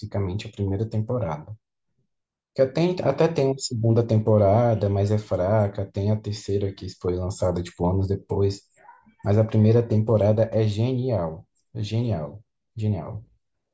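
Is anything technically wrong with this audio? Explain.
No, the recording carries no audible technical faults, and the signal stays intact and stable throughout.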